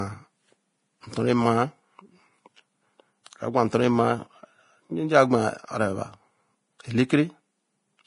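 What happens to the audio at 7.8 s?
Likely heavy Vorbis compression, consistent with a bitrate near 29 kbps, runs throughout: treble quantised into grainy hiss, nothing above 10.5 kHz, and blurred, roughened speech at 7.8 s.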